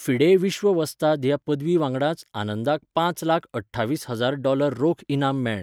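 No technical faults are audible.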